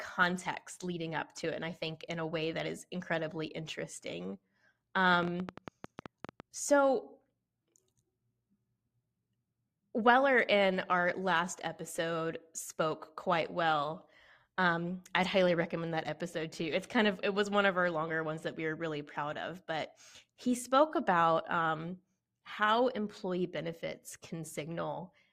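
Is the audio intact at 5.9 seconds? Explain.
No. A train of clicks runs from 5.14 to 6.41 s: about ten irregular ticks per second, around fifteen in all, peaking about 10 dB above the speech, likely from electrical interference. Each shows as a sharp waveform spike and a thin vertical broadband line on a spectrogram.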